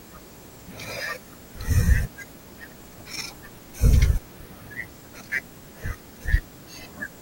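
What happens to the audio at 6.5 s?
At 6.5 s the speech carries a video or display buzz that runs through the whole clip: a 59.94 Hz field-rate buzz with hash above it, plus a thin 15.7 kHz line-rate whine, roughly 30 dB below the speech, from a screen or video cable coupling into the audio path.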